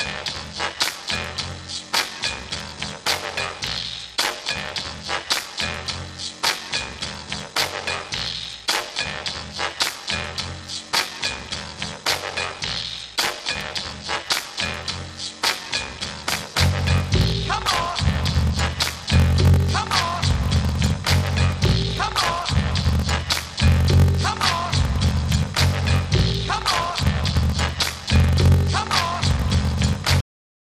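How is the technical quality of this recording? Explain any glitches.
The recording has two clear technical faults: a steady buzz with slowed playback, and an abrupt ending.

Block size mismatch (padded), throughout: a 46.9 Hz buzz runs under the sound, which plays at 0.861 times normal speed. One stage writes shorter blocks than the next reads, which fits a 1024-sample read, and each shortfall is zero-filled.

Cut-off end, at 30.21 s: the sound stops mid-event and drops straight to digital silence with no natural decay. The final buffers were never written or played out.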